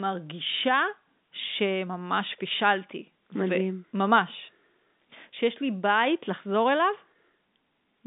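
No technical faults can be heard in the speech, which carries the narrow band of A-law telephone coding, with sound running from about 150 Hz to 3.7 kHz and nothing above 3.8 kHz.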